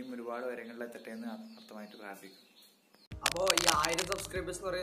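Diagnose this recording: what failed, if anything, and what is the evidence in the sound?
Cable scratch noise in the analogue wiring: from 3.26 s to 4.28 s, dense, uneven bursts of scratching sit over the sound, roughly 5 dB above it. The likely cause is a worn cable or connector being moved, its contact resistance fluctuating rapidly and injecting noise for about one second.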